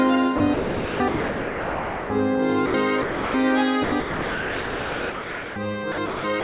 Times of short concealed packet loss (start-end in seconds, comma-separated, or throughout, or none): none